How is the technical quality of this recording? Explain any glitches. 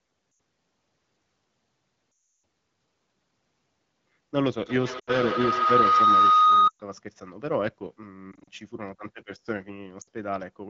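The recording has two clear kinds of fault: repeated dropouts from lost AMR speech frames, and a feedback howl in the middle. It is wideband AMR at 12.65 kbit/s, and coding damage is light.

Lost AMR speech frames occur at 0.31–0.39, 2.11–2.43, 4.99–5.15, 6.68–6.82, 8.32–8.48 and 10.01–10.07 s. Corrupted frames failed their check. The decoder filled each gap by repeating the last good pitch and vocal tract settings, at falling gain. Short gaps of 60 to 120 ms drop quickly to near silence. The 320 ms gap at 2.11 s drops to near silence within two frames. Speech then returns thin and rough. The gap at 8.32 s is broken up, with no single run longer than 40 ms.

A feedback howl runs from 4.66 to 6.93 s. Two devices on the same call in one room formed a loop from microphone to loudspeaker and back. Each pass added level, so the echo grew instead of dying away. It narrowed to a tone around 1.5 kHz, with the loop repeating roughly every 150 ms. 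At its peak it is about 6 dB louder than the speech.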